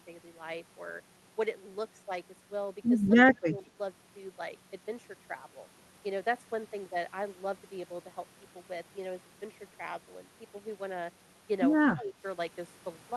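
At 3.33 to 3.78 s the speech sags by roughly 10 dB, and the same thing happens again at 11.95 to 12.21 s. That's most likely speech suppressed in double talk: with both ends talking at once, the echo canceller couldn't tell this talker from the loudspeaker echo and turned the lot down. Throughout, the audio is band-limited near 12 kHz, which fits an Opus call path.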